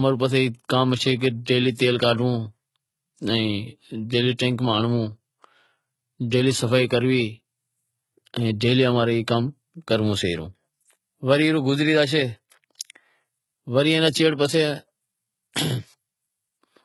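Speech throughout, likely passed through HE-AAC compression at heavy damage, pointing to about 16 kbps: rebuilt treble stops near 11.8 kHz, and sibilants sound gritty, metallic or lispy.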